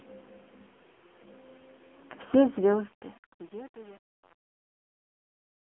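From start to finish the speech is carried by the AMR narrowband mobile codec. The band is squeezed to a phone line, roughly 250 Hz to 3.4 kHz, and nothing above 3.6 kHz survives. The codec rebuilds speech from a vocal-tract model fed by sparse pulses. Here the damage is heavy. The voice sounds buzzy, hollow and synthetic, which fits a low rate near 6.7 kbps.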